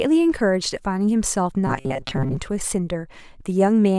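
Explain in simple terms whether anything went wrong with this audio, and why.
Fresh audio most likely stopped arriving on time between 1.67 and 2.37 s, so the playback filled the gaps by repeating one tiny slice of sound, about 7.5 ms long, over and over while much of the real speech was skipped. This is robotic sound from repeated short buffers. The rapid repeats stamp a fixed buzz of 133 Hz onto the voice, making it sound hard, metallic and machine-like while still loosely following the speech.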